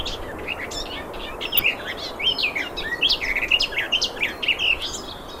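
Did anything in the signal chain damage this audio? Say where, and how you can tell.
Yes: DAB burbling from 1.54 to 1.65 s, a brief burst of noise blips from the codec stage. Residual bit errors got past error correction into the MP2 audio data, putting short blips of noise into single sub-bands.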